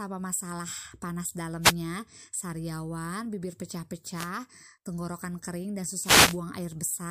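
Three short swishes of static break through this speech recording: from 1.61 to 1.75 s, between "masalah panas" and "sariawan bibir"; from 4.12 to 4.31 s, before "tenggorokan kering dan"; and the longest, from 5.99 to 6.39 s, right after "tenggorokan kering dan". Each is a wireless microphone noise hit. The analogue FM radio signal fades briefly as reflected paths cancel, so receiver noise rises and covers the voice.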